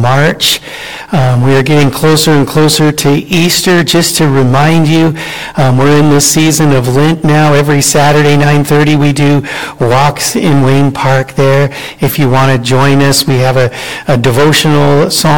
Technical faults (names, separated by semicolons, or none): hard clipping